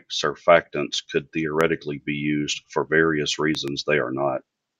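Loud pops hit this speech clip at 1.61 to 1.63 s, between "surfactants could" and "be used for various", and again as a quick double pop at 3.55 to 3.70 s. Each is a sharp transient well above the speech, likely a sudden voltage pulse from a plug, switch or static, with the speech continuing underneath.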